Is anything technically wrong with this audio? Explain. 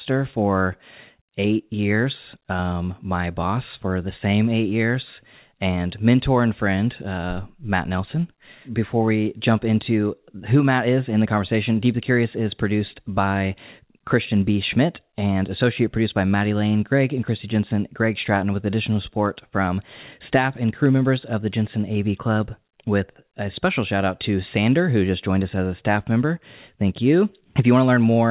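No, this speech has come through an ordinary call path working as intended, and the way its bandwidth stops at 4 kHz fits narrowband G.711 mu-law telephone coding at 64 kbps, which is the expected character of that path rather than something wrong.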